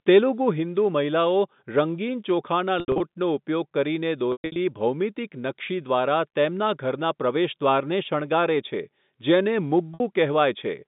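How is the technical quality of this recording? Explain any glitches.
The recording has three glitches caused by packet loss with pitch repetition. They sit on a telephone line using G.711 coding, which limits the band to roughly 150 Hz to 3.7 kHz.

Packets failed to arrive at 2.80–3.00 s (140 ms lost across 200 ms, longest run 80 ms), 4.32–4.56 s (200 ms lost across 240 ms, longest run 120 ms) and 9.94–10.00 s (a 60 ms gap). The receiver covered each hole by looping the last pitch period and fading it out over about 50 ms. The brief gap comes across as a held, buzzy tone. The longer runs fade to silence before speech cross-fades back in.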